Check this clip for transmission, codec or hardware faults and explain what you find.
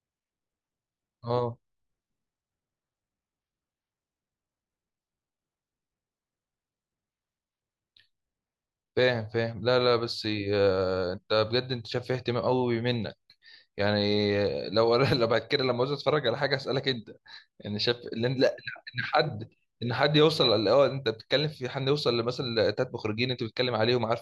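No fault turns up anywhere in this speech recording. There is nothing to locate or explain.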